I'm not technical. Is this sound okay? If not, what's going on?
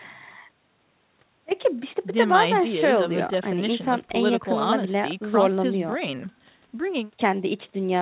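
Yes, nothing in this speech clip is going wrong. It went through an ordinary phone-style call connection, which keeps nothing above 4 kHz, so it has the narrow, muffled quality of a regular phone call.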